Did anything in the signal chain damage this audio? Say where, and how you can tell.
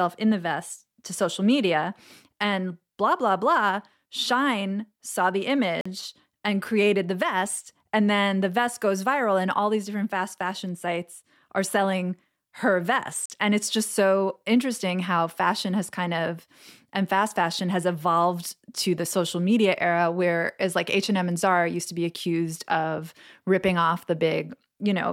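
Yes. At playback there are 44 ms silences at 5.81 s and 13.26 s, likely a Bluetooth dropout. The speech resumes further along, skipping material rather than pausing.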